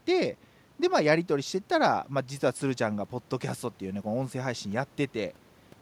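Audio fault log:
Nothing to log here: I listened through the speech and didn't hear a single fault worth a line.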